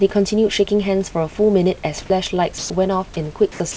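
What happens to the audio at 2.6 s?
From 2.58 to 2.70 s the speech cuts out and a steady, featureless hiss fills the gap for about 120 ms before the talker comes back. That's sound dropped by the voice detector: the sender likely judged this soft stretch to be background, stopped sending, and the receiver slotted in comfort noise instead. Roughly 80 ms of real speech goes missing, so the phrase sounds clipped, with a flat patch of noise sitting where the talker should be.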